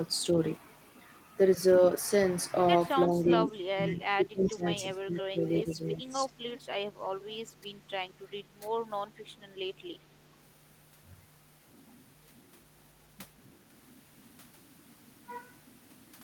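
From about 3.05 to 4.67 s the speech keeps dipping, dropping by up to roughly 25 dB and thinning out, over about a second and a half. That's speech suppressed in double talk: the far end was most likely talking at the same moment, and the echo canceller, unable to tell this talker from its loudspeaker echo, turned everything down. Briefer, shallower dips of the same kind follow at 4.93 to 5.41 s (about 20 dB), 5.63 to 5.79 s and 5.97 to 6.28 s (both around 10 dB).

There are also three short echo leaks, at 4.46 to 4.51 s, 5.87 to 5.96 s and 6.53 to 6.61 s. Each is a copy of the speech arriving 364 ms late. This is likely because a loudspeaker's output reached the microphone and the canceller didn't fully remove it. The first and last are quiet, about 25 dB below the speech, but the one near 5.9 s is only about 10 dB down.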